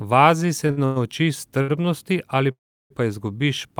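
At 0.71 s the speech briefly holds on one sound for about 64 ms, with a slight buzz or dip, and then carries on without any loss. This is a short stall from a late packet: a packet did not arrive in time, the jitter buffer ran empty, and the receiver stretched the last sound until the packet came in. It happens again at 1.62 s, lasting about 66 ms, just before "ali pa".

Between 0.85 and 0.98 s the sound turns into a fading buzz or hiss lasting about 105 ms, and the speech then resumes where it left off. This is a call audio freeze, likely caused by packets being held up in transit until the jitter buffer emptied. A longer freeze runs from 2.51 to 2.92 s. The held sound fades to silence for about 340 ms of the roughly 389 ms inserted, and the speech then picks up at the same point, with little or nothing missing.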